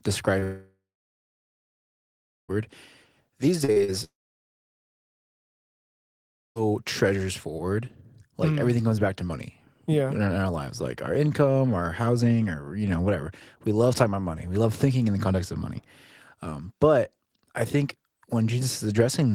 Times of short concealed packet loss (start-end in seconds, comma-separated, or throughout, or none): 0.39-0.43, 3.64-3.90